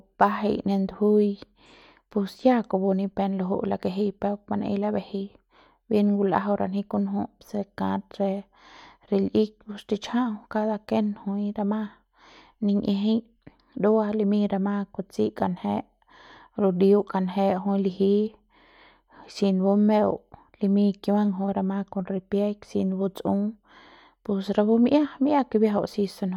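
No technical faults can be heard anywhere in this speech recording. There is no event here that needs a time marker or a description.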